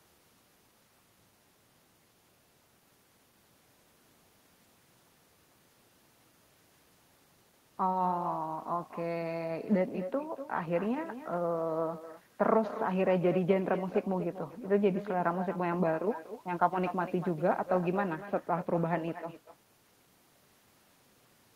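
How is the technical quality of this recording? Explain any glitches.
The recording is let down by echo with no canceller, present from start to finish of this speech. The far end is playing the call through a loudspeaker, its microphone is catching that playback, and nothing in the chain strips it out, so the talker's own speech returns after the network round trip. Every phrase is trailed, about a fifth of a second later, by a copy roughly 12 dB quieter that sounds thinner than the original.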